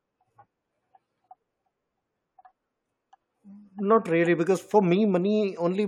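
Speech recording with no audible technical faults.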